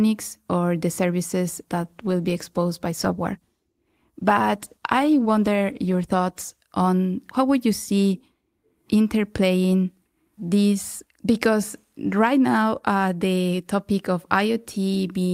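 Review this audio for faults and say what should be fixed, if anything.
Call bitrate drop from 1.76 to 6.69 s, between "or the services" and "on how would you": the speech turns coarser, which fits the encoder falling from 40 to 17 kbps after the bandwidth estimate sank. To prevent it, give the call steadier network headroom or set a higher minimum encoder bitrate.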